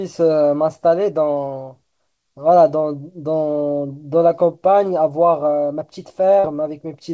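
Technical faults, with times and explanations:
6.40 to 6.47 s, short concealed packet loss: about 40 ms of the call failed to reach the decoder in time, and the receiver bridged the gap by extending the sound just before it, following its pitch where voiced and using shaped noise where not, before crossfading back into real audio. That patch is heard as a brief smear or wobble. The band-limited call audio, with nothing above 8 kHz, fits a wideband codec such as G.722.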